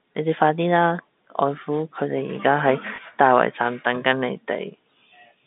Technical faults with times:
2.96-2.98 packet loss with last packet repeated

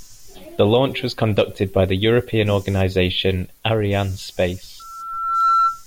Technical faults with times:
4.79-5.84 loudspeaker feedback squeal

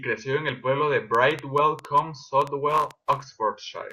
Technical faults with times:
1.15-2.92 train of clicks

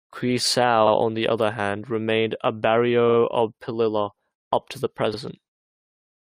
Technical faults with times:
0.86-0.93 repeated frames
3.08-3.17 repeated frames
5.13-5.17 repeated frames

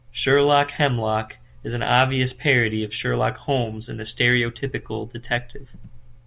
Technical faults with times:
none

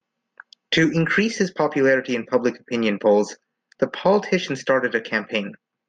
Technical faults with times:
none

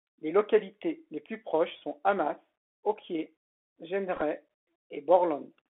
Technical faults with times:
0.00-5.70 Bluetooth CVSD headset codec
4.16-4.22 Bluetooth headset packet repeated

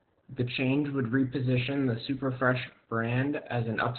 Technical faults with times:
0.00-3.98 Opus voice compression

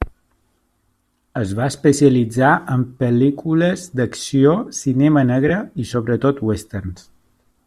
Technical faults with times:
5.48-5.50 lost LE Audio frames

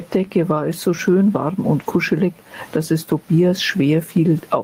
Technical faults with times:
0.00-4.64 gain pumping
1.79-1.85 lost packet rebuilt from error correction

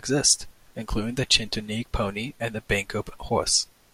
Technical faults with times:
none

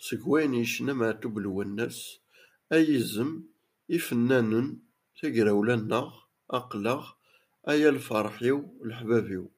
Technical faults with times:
none

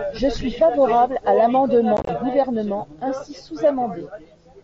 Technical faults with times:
1.97-2.09 unconcealed Bluetooth headset packet loss

